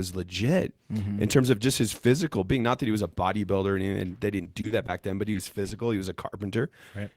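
Speech with network faults clustered in its second half. From 4.37 to 4.90 s, repeated packet loss gives a choppy stretch: five gaps up to 30 ms, patched by continuing prior sound, showing as repeated frozen harmonic patches on a spectrogram. A jitter buffer slow-down follows at 5.01 to 5.31 s, adding 43 ms so speech runs at 88% speed at unchanged pitch, with visibly stretched harmonics. Short concealed packet loss fills 20 ms holes at 5.33, 5.63 and 5.69 s, each a brief smear or wobble seen as a short flattened spectral slice.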